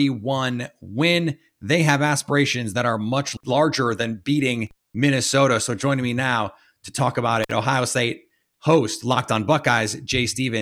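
At 4.67 s, right after "much larger than beating", the speech drops out for about 236 ms, ending near 4.95 s: an intermittent contact, where a loose plug or cable briefly opens the signal path. Crackle marks both edges and faint hiss fills the gap. A shorter break at 7.43 to 7.51 s, after "now to talk about", opens for about 50 ms. On a waveform each shows a flat near-silent stretch bounded by spiky clicks; a spectrogram shows broadband vertical streaks around a dark gap.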